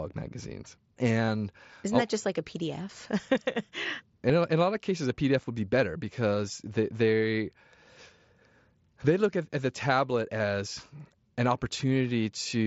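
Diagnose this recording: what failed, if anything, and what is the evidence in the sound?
Concealed Bluetooth headset packet loss on the wireless link: the receiver filled gaps with repeated matched waveform at 1.26–1.28 s, before "isn't that I'll just" (three lost frames likely), and at 4.29 s, before "a in a lot".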